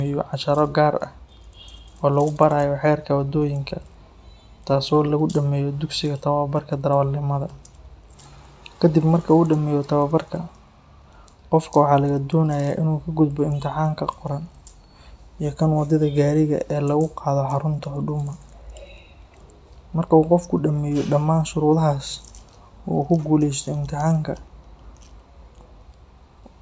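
No technical faults can be heard in this recording.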